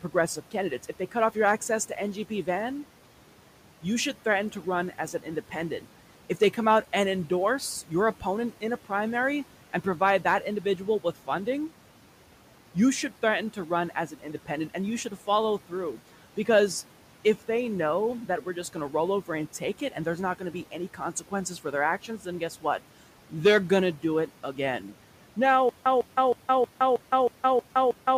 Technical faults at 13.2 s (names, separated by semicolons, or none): noise suppressor artifacts; speech cut by the noise suppressor